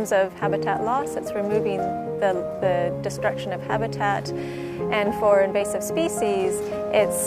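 Nothing in this recording stands out as a technical fault at any point, so there's no problem here to track down or explain.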